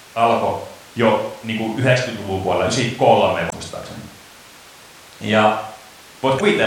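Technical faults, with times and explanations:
3.49–3.53 s and 6.36–6.41 s: damaged data in a compressed stream. Corrupt frames throw the decoder out of sync. It searches for the next valid frame, leaving a brief glitch each time.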